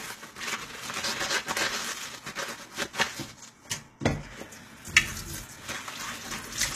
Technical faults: low-bitrate audio saved at a high bitrate

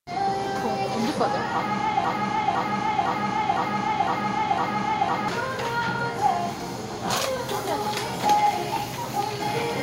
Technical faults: broken-record loop

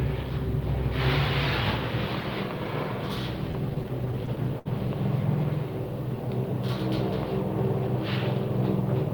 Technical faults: repeated stalls (stutter)

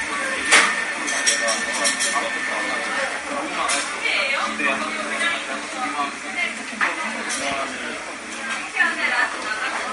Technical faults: MP3 compression

